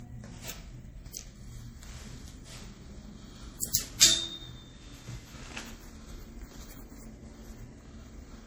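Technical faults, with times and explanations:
throughout, generation loss: The audio is swirly, smeared and hollow, with blurred attacks and gaps in the spectrum beyond what one low-bitrate pass would leave. This is likely from lossy re-encoding about seven times, consistent with a 64 kbit/s MP3 chain, where each pass re-quantises on a shifted frame grid and the errors build up.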